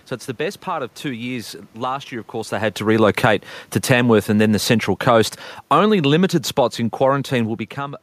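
Speech where, just after "of course they had" at 2.82 s, automatic gain falling begins: the gain control, reacting to a loud input or strong background noise, eases the level down by about 8 dB until 7.67 s. On the waveform the envelope tapers steadily, and the spectrogram dims evenly, with the room noise sinking along with the voice.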